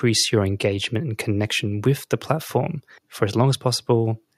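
No technical faults were detected anywhere in the recording.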